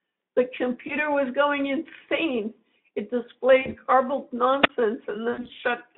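Speech over a narrowband Speex line (roughly 150 Hz to 3.6 kHz) suffers VoIP packet loss concealed by the speech codec at 0.87–0.93 s, 3.61–3.76 s and 5.31–5.60 s. At each point the sound smears into a buzzy tone or coloured noise that fades rather than going silent, which fits one lost 20 ms frame, then about 40 ms, then scattered losses over about 280 ms. At 4.61–4.69 s a wireless microphone squelch dropout is different: a rise of hiss leads into a hole of near silence lasting about 16 ms, with no stretched tone, before the signal returns.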